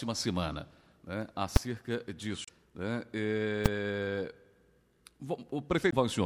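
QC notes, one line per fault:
1.56 s and 3.66 s, invalid numbers at full scale: two sharp bangs. A calculation blew up into infinite or invalid values, and the output slammed to the maximum positive or negative level for one processing block. The blocks are tiny, about 5.8 ms and 2.9 ms, which fits 256- and 128-sample blocks. The pops at the start and end of each block merge into a single very loud crack.
2.45–2.49 s and 5.89–5.94 s, damaged data in a compressed stream: short blips, each roughly 45 ms long. Corrupted bytes in the encoded stream made the decoder misread those frames and lose sync. It then hunted for the next valid frame header. The garbled frames come out as a brief glitch.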